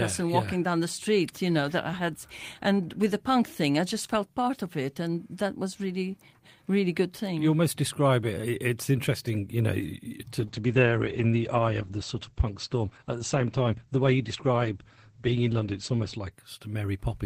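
After "interesting you know to", a call bitrate drop to 10 kbps from 10.41 to 16.37 s coarsens the speech and cuts everything above 8 kHz.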